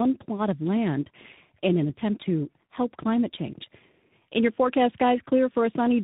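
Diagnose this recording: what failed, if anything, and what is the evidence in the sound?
The failure is tandem speech coding, at the codec stage of the call path. It runs throughout the speech. Nothing is heard above about 3.8 kHz, so the speech is muffled and confined to a narrowband telephone channel. It sounds rough and warbly, beyond what one coder would leave. That fits a chain of G.729A at 8 kbit/s, then G.711 mu-law, then G.726 at 32 kbit/s. Two of those are lossy speech codecs in a row. Each re-encodes the previous decoder's already damaged output, so the errors stack.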